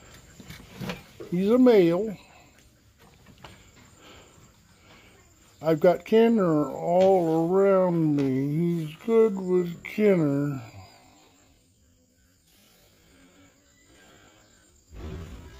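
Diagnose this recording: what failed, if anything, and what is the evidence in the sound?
A time-stretched section runs from 6.10 s to the end at 15.6 s. At 6.10 s the pace abruptly halves, playing at about 0.5 times the original speed while the pitch holds steady. The sound drags because short pieces are being repeated to fill the extra length. The likely cause is software at the editing or processing stage stretching this part to fit a required duration while keeping its pitch.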